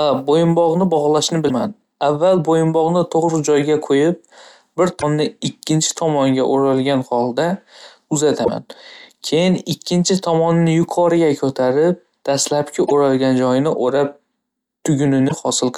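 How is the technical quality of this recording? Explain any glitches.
The speech recording is marred by five short glitches from damaged data in a compressed stream. At 1.45–1.51 s, 4.98–5.03 s, 8.41–8.49 s, 12.83–12.92 s and 15.25–15.32 s, stretches of the encoded data arrive corrupted, so the decoder misreads those frames, loses its place and hunts for the next valid frame header. Each time, this produces a brief chirp or squawk lasting roughly 50 to 90 ms that cuts across the speech before normal decoding resumes.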